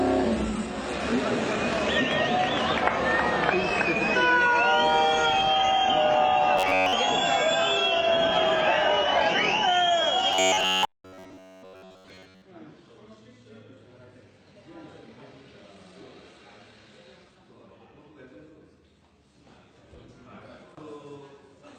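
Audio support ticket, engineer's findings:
Robotic sound from repeated short buffers, 6.58–6.93 s and 10.33–12.44 s. Rigid metallic buzz at 93.8 Hz. Likely cause: input underrun, a ~10.7 ms buffer replayed in place of most of the skipped audio. Spectrogram shows a 94 Hz harmonic comb; waveform shows identical repeating cycles.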